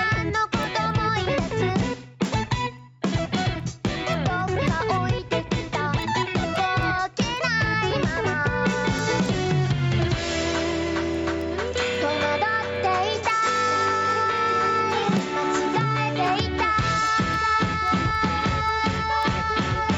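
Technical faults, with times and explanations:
Throughout, gain pumping: gain likely set far too high, with a fast limiter pulling it down on loud sounds, so the gain swings by about 10 dB.
0.36 to 19.77 s, word clock ticks: an unlocked receiving clock drifting by around 70 ppm drops or repeats a single sample roughly every 0.3 s, giving some 70 steady ticks.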